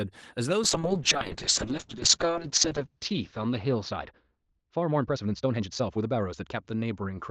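A speech recording sent over an Opus call link. Call bitrate drop from 0.64 s to the end: the encoder shifts to much coarser coding, consistent with falling from about 32 to roughly 7 kbps. The audio turns rough and muffled as the bandwidth narrows from 12 kHz to 8 kHz, at its worst for about 2.2 s. Time-stretched section from 3.83 to 6.57 s: the pace jumps to 1.47 times faster with unchanged pitch, sounding rushed, likely from software dropping short pieces to shorten it.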